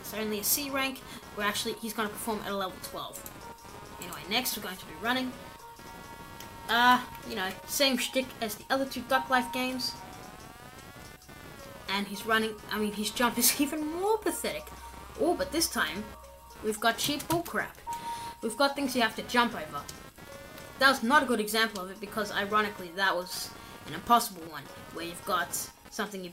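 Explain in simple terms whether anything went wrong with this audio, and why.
Computer activity noise runs through the whole clip, from the first second to the last. It is a buzzy, chirping hum, pulsing roughly 200 times a second, sitting well below the main sound. The computer's processor, graphics card or mouse draws changing amounts of power, and those swings leak onto the ground wire shared with the audio circuit. The noise follows what the computer is doing, not the audio itself.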